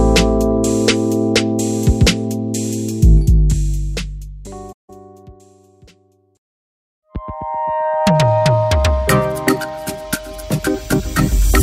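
From 4.72 to 4.90 s, AAC frame loss with muting means the decoder zeroed missing frames, consistent with about eight. This leaves a 0.17 s hole that fades out and back in.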